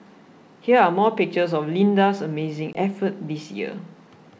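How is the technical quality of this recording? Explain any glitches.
One glitch stands out in this wideband G.722 speech: packet loss on an ADPCM call at 2.73 s. About 20 ms, roughly a couple of packets, drops to hard-edged silence. The decoder's adaptive predictor and step size then no longer track the sender's, so the speech returns at about 2.78 s slightly distorted, settling within some tens of milliseconds.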